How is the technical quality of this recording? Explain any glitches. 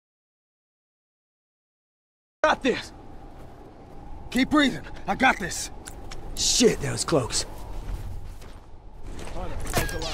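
The recording opens with an audio dropout to silence lasting from the start to 2.44 s. The input was likely lost, through a disconnected source or a mute, while the recorder kept writing silence, so the first stretch is dead silence without room tone before sound enters abruptly.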